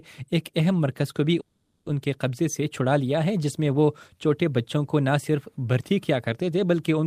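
Call audio freeze at 1.40 to 1.87 s: the last sound is stretched into a fading fill, likely because delayed packets emptied the jitter buffer, and playback then resumes intact 460 ms late.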